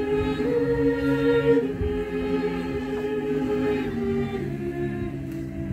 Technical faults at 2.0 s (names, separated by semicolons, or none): none